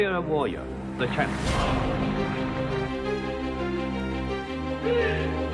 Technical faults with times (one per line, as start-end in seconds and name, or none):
4.00-5.54 resampler restarted on every block